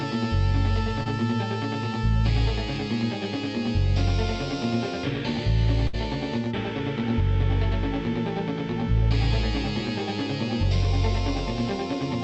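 Audio carried over a call path, with two packet-loss faults. At 1.03 to 1.07 s there is short concealed packet loss: about 20 ms of audio never arrived in time, and the receiver covered the hole by extending the preceding sound for roughly the same span before blending back. It is heard as a brief smear or wobble rather than a gap, and what sets it apart from the later fault is its brevity: no audible fading, just a momentary blur.

At 5.87 to 5.95 s comes a burst of packet loss, about 60 ms missing in a row. Here the concealment has to stretch the last sound across a longer hole and turn it down as it goes, so a held buzz or fading hiss is heard. The audio then picks up further along, with the lost stretch gone.

That decay and skip distinguish it from the brief smear at 1.03 s. Throughout, the treble stops near 8 kHz, which fits an Opus call codec.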